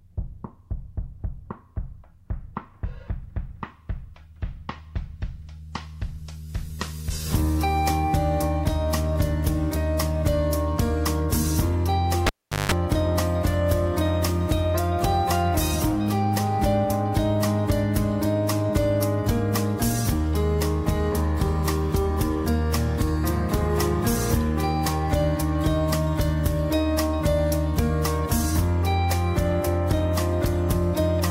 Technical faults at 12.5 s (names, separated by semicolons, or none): cable pulled and plugged in